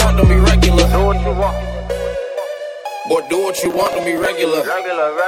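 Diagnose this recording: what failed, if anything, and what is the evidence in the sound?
Processor overload crackle, driver/buffer stage, 3.57–4.25 s: the CPU missed around twenty short buffer deadlines, leaving hard-edged waveform gaps and dense vertical spectrogram streaks.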